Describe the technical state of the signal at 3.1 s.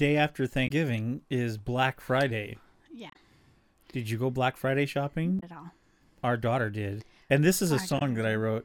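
Damaged data in the compressed stream, 3.07 to 3.16 s, right after "is black friday": corrupt frames desync the decoder, giving a brief glitch, seen as a sharp spectrogram smear.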